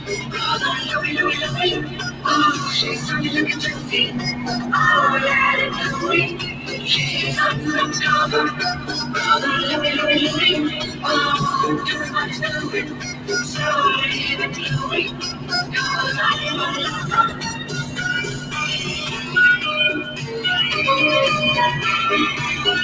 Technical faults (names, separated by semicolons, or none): noise suppressor applied to music or sounds; sound cut by the noise suppressor